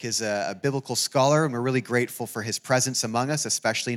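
Nothing in the audio stood out as a technical problem on listening.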